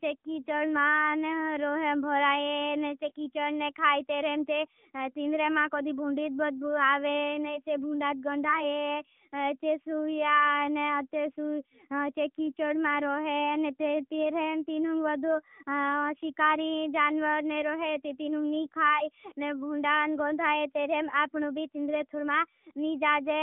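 Throughout, the speech carries AMR narrowband mobile codec damage. Nothing passes above 3.7 kHz. Buzzy, synthetic texture fits a mid rate near 10.2 kbps.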